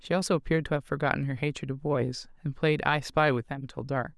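Nothing here trips up the ear: the speech runs along from its first moment to its last without any glitch, dropout or odd artefact worth pointing out.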